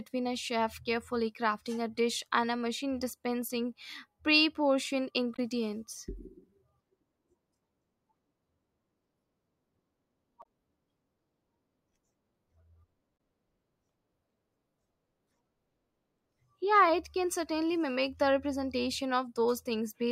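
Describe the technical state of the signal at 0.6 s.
At 0.6 s the signal is intact, with no audible fault at that point.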